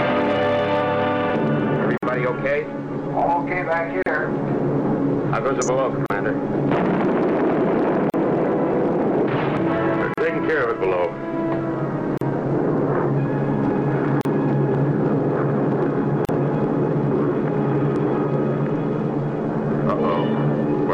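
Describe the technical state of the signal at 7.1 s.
At 7.1 s the signal is intact, with no audible dropout, distortion, glitch or other technical fault at that moment.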